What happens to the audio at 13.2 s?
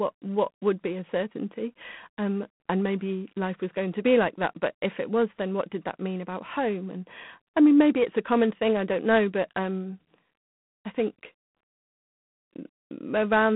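At 13.2 s you're still hearing the G.726 ADPCM damage that runs the whole clip: coarse prediction-error coding leaves a rasping hiss riding the speech, which fits 24 kbit/s, and nothing above 3.9 kHz.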